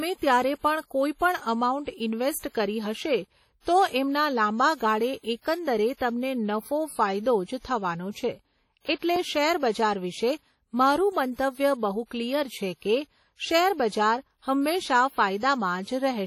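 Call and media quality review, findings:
Likely WMA compression, heavy, throughout: low-rate transform codec, long blocks spreading quantisation noise over tens of milliseconds, weak spectral lines dropped. Speech sounds ringing and washy, hiss rising and falling with level; damage fits roughly a 32 kbps stream.

Pre-echo at 2.39–2.43 s (about 38 ms) and 9.00–9.02 s (about 25 ms): sharp attacks late in codec blocks, block-wide quantisation noise filling the quiet gap before onset. Short hiss leads each attack; onsets soft, smeared.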